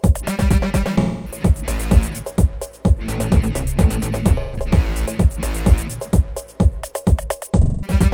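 AAC frame loss with concealment occurs at 0.99–1.40 s, 4.40–4.56 s and 7.62–7.93 s. Compressed frames went missing and the decoder patched each gap from the last good spectrum, leaving a smeared, noisy, phasey stretch of roughly 130 to 260 ms.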